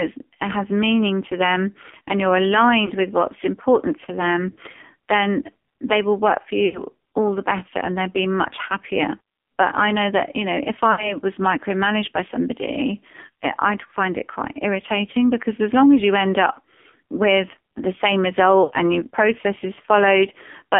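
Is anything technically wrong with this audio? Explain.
Yes. The speech is thin, buzzy and synthetic throughout, confined to a telephone band of roughly 250 Hz to 3.5 kHz with nothing on top. This is the AMR narrowband mobile codec under heavy strain. The encoder models each 20 ms frame as a vocal-tract filter excited by a few pulses. The coarseness heard here fits a low mode around 5.9 kbps, where too few bits leave the voice rasping and artificial.

The speech also briefly smears and drops out in five places, from lost AMR speech frames. These occur at 2.86 to 2.92 s (40 ms), and at 4.50 to 4.58 s (60 ms) between "with what's important to" and "then they will work". A longer one falls at 6.66 to 6.82 s (80 ms) between "they will work for" and "all the better and". Another sits at 10.92 to 11.16 s (60 ms) between "that you know if" and "was micromanaged by somebody", and the last at 18.64 to 18.72 s (60 ms). 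Each gap fits two to four corrupted frames. In each, the decoder repeats the last good pitch and filter with falling gain, so the sound stretches, fades, then resumes weakly.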